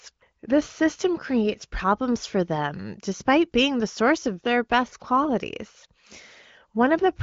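No faults are audible in this speech; it has passed through an AMR wideband (HD Voice) codec path at 18.25 kbit/s, with nothing above about 7.3 kHz.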